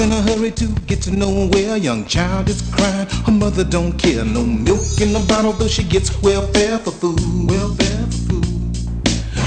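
Nothing goes wrong anywhere in this one, so there's simply no fault to point to at any moment.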